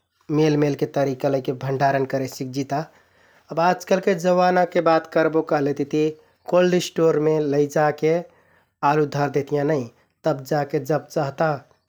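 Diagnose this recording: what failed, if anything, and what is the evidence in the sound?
A double loud pop lands between 4.79 and 4.95 s: two sharp thumps a few decibels above the speech level, with the speech continuing underneath. The likely cause is a voltage transient in the analogue wiring, such as a plug or switch contact, shaped by the following circuitry.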